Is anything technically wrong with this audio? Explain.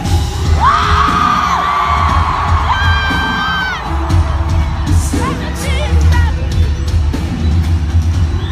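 Yes. At 7.48 s there is a brief chirp-like blip, peaking around -15 dBFS. It is a corrupt frame decoded: one compressed frame's bits were damaged and played anyway, misplacing energy in frequency.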